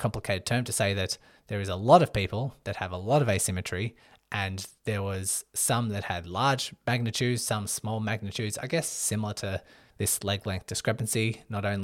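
No technical faults can be heard anywhere in this recording.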